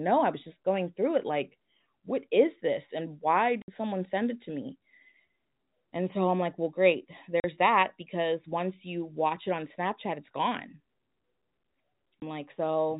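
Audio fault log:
3.62–3.68 s, packet loss filled with silence: about three packets of speech went missing and the receiver played silence in their place. This left a 60 ms hole with hard edges just before "someone send it to".
7.40–7.44 s, packet loss filled with silence: lost packets were again replaced by silence. This cut a 40 ms gap between "I'm like well great" and "that because once you".
12.20–12.22 s, packet loss filled with silence: a single lost packet became a 20 ms silent hole with abrupt edges. The 20, 40 and 60 ms gaps fit a 20 ms packet.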